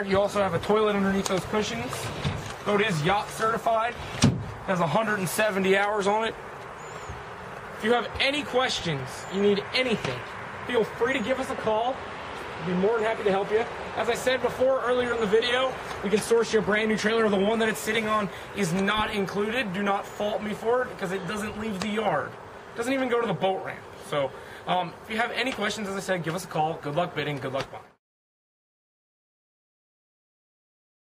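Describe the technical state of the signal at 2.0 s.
Around 2.0 s the signal is intact, with no audible technical fault at that point.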